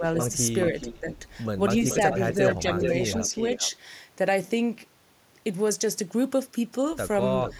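From 0.00 to 0.04 s, speech suppressed in double talk: the echo canceller likely confused the talker with loudspeaker echo, briefly dipping the speech by about 5 dB. From 0.21 to 0.26 s, an echo leak: residual loudspeaker pickup likely escaped cancellation, returning a copy about 10 dB below the speech, delayed about 427 ms. Between 0.71 and 1.12 s, speech suppressed in double talk recurs, likely from the canceller again mistaking the talker for echo, knocking the speech down by up to about 10 dB. Overlapping it, from 0.78 to 1.16 s, the echo leak likely returns, about 15 dB below. From 1.89 to 3.71 s, the echo leak likely persists longer, a copy about 10 dB down, trailing by about 430 ms. At 7.43 to 7.54 s, a last echo leak scrap appears, likely the same residual pickup, about 10 dB down and about 435 ms late.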